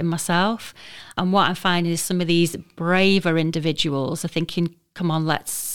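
Nothing technically wrong turns up anywhere in this bit of speech, so there's no fault to point to here.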